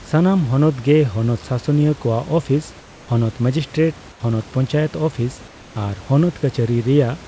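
Comfort noise in place of the background appears in this speech recording from 2.80 to 3.08 s and from 4.12 to 4.20 s. During those pauses the real room noise gives way to a steady, featureless hiss, about 2 dB and then about 6 dB quieter. The likely cause is the call's discontinuous transmission substituting synthetic noise in the gaps.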